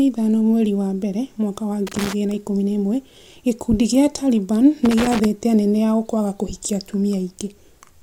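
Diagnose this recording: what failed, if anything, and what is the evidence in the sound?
Loose connector crackle at 1.87 to 2.13 s, between "wa mbere mwaka wa" and "na ikũmi na ĩmwe", and again at 4.85 to 5.25 s, just before "anene ao kwaga kũhikia". This is in the analogue wiring: a worn contact rapidly breaking and remaking chops the speech into irregular scratchy bursts.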